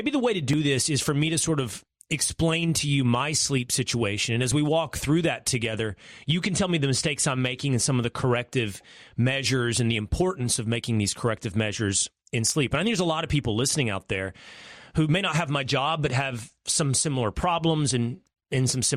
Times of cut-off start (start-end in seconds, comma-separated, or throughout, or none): none